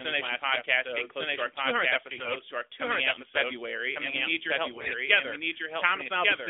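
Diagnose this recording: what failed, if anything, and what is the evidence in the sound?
Doubled audio track, throughout: the speech repeats about one second later at roughly equal level, dry and full-band, likely from a second capture path or an edit stage.

AMR bit errors, at 2.10 to 2.36 s and 4.70 to 4.95 s: a network fault. Speech turns hoarse and gargly while keeping pitch and level, because flipped low-priority bits misplace the codec's excitation pulses.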